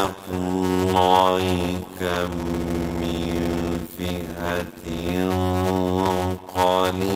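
A block size mismatch (padded) runs through the whole clip: one stage hands over shorter blocks than the next stage reads, and the shortfall in each block is filled with silence. The figures fit 256-sample writes into 480-sample reads. That inserts a gap in every block, producing a steady buzz at about 91.9 Hz, and the sound plays at 0.533 times its normal speed while keeping roughly its normal pitch.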